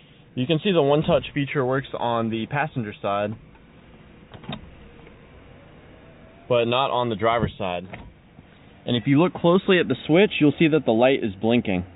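No technical faults can be heard anywhere in the clip. It has come through a telephone-grade call path, most likely G.711 mu-law, so nothing is present above 4 kHz and the top end has the narrow, boxy quality of an ordinary phone line.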